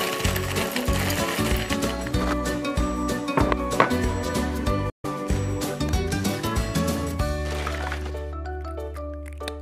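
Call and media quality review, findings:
Gap in the audio, 4.90 to 5.06 s, about 160 ms of silence. Sound picks up later in its timeline, as if it had kept playing underneath. Likely a Bluetooth dropout on the headphone link: packets arrived too late and were discarded, consistent with roughly six lost frames. Worth checking the wireless path first.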